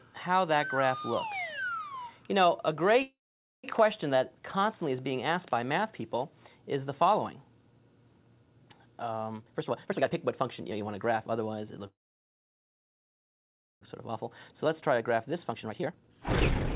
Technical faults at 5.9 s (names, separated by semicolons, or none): none